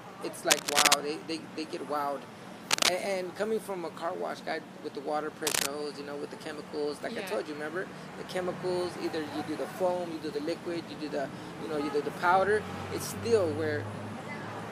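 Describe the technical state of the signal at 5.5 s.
At 5.5 s there is cable scratch noise, running from about 5.46 to 5.66 s. A dense, ragged rustle sits on top of the sound at around 5 dB above it for that fifth of a second. It likely comes from a worn cable or connector being moved, its contact resistance jumping erratically. Unlike a single click or a steady hiss, it is a crowded, uneven cluster of crackle that starts and stops with the movement.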